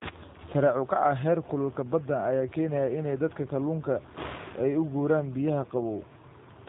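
Throughout the speech, G.729 codec damage is plainly audible. The voice is rebuilt from a vocal tract filter, a pitch predictor and sparse pulses, giving a rough, slightly synthetic texture, consistent with 8 kbit/s G.729A. Nothing passes above 3.8 kHz.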